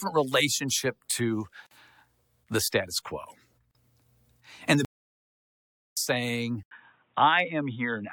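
The speech was encoded in separate pieces of about 2 s and joined without trimming the encoder delay and padding, leaving a gap at a join of encoded pieces: a 46 ms silence at 1.67 s after "relationship to", and a 38 ms one at 3.71 s after "the status quo", each with smeared edges before the sound resumes where it stopped.

From 4.85 to 5.97 s the output goes silent for about 1.08 s in mid-flow, a playback stall most likely caused by the player running short of data or being blocked, after which the sound carries on.

At 6.63 s the input likely switched to a poorer device. After an 80 ms silence the sound turns narrow and dull, and gains a faint new background noise roughly 45 dB down, at much the same level, to the end.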